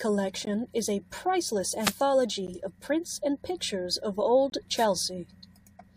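A speech recording with two kinds of fault. Three gaps between stream segments occur at 0.45 s, at 2.47 s just before "of prints and pictures", and from 4.50 to 4.52 s after "prints and pictures of". They fall about every 2 s, matching 2-second segment boundaries, and last roughly 12 to 22 ms. The waveform drops to flat silence with hard edges, and the spectrogram shows thin vertical blank stripes. Two wireless microphone noise hits, from 1.78 to 1.96 s after "is a priceless" and from 4.76 to 4.86 s, come from a fading FM radio link. The receiver hiss swells into a brief burst of static. On a spectrogram it shows as a broadband smear across all frequencies, and the waveform gains a fuzzy, raised noise floor.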